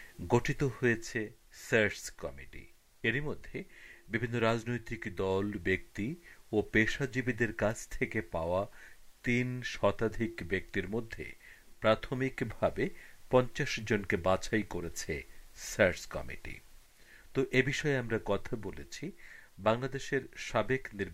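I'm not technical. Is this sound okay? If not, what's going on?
Yes, nothing wrong can be heard in this sound; no technical faults come through anywhere in it.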